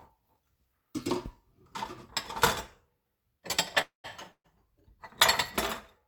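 Two call audio freezes interrupt the sound, at 3.81 to 4.06 s and 4.32 to 4.46 s. Each time, the last sound stretches into a fading buzz or hiss, then silence, about 130 ms and 70 ms. Playback resumes where it stopped, so 225 ms and 124 ms of delay are added and nothing is lost. Packets likely stalled and emptied the jitter buffer.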